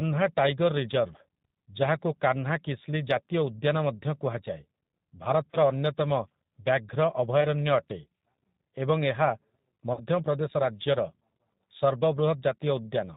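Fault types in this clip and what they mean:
G.729 codec: the whole clip runs through this 8 kbit/s VoIP speech coder, which rebuilds the voice from a filter model and a handful of pulses, so nothing above 4 kHz survives and the damage is plainly audible as a rough, slightly synthetic, band-limited sound.
VoIP packet loss concealed by the speech codec: short gaps where the decoder fills in from its last pitch and filter, giving a brief buzzy or noisy smear, at 5.51 s for about 20 ms, 7.41 s for about 10 ms, and 9.93 s for about 40 ms, with the voice weak or distorted just after.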